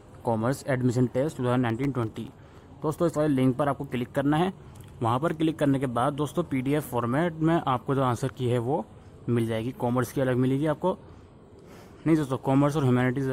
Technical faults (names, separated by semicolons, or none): processor overload crackle